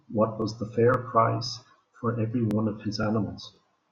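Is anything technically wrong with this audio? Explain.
Yes. The speech has overlapping chunks, heard at 0.42–0.44, 0.94–0.97, 1.47–1.49, 1.99–2.01, 2.51–2.53, 3.03–3.06 and 3.56–3.58 s. The audio was handled in 0.5 s blocks, each starting 23 ms before the previous one finished. That 23 ms replays at every join, producing a regular stutter about every half second.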